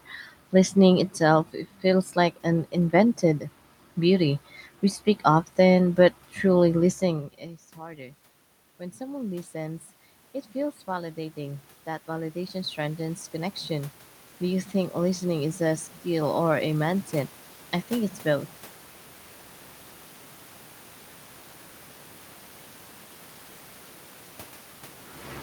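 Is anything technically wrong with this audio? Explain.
Yes. Automatic gain rising occurs from 8.78 to 9.91 s (about 3 dB) and from 10.53 to 17.4 s (about 10 dB), just before "I think it's both". After the input dropped by about 21 dB, the gain control slowly climbed. The room noise swells along with the speech, which sets this apart from the talker moving around 7 s, where only the speech level changed.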